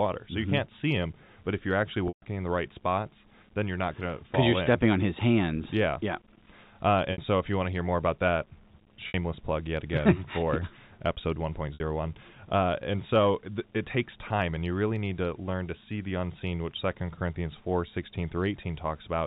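Packet loss with pitch repetition appears at 2.08 to 2.22 s, a 140 ms gap, then at 7.12, 9.08 and 11.74 s, 60 ms each. The receiver repeats the last pitch period across each gap, so the short ones sound held and buzzy while the longest fades briefly to silence. The telephone-band G.711 coding underneath is working normally.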